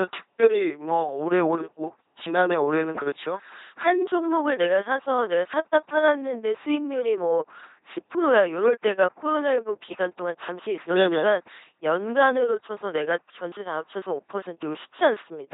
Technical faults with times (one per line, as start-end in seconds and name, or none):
0.00-15.53 LPC-10 vocoder